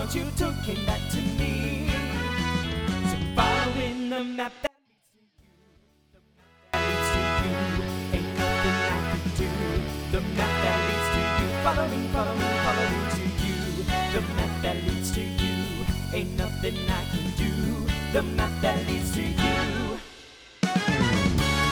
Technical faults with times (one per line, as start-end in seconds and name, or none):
4.67-6.74 audio dropout to a faint residue